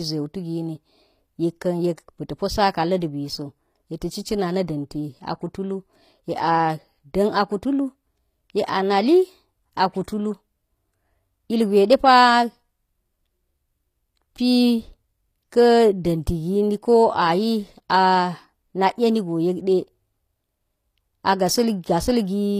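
Throughout the speech, the upper treble sounds gritty and metallic, with s sounds turning lispy. This is likely HE-AAC compression at a low bitrate, around 24 kbps: the highs are rebuilt from copied lower bands, so they don't match the true harmonics.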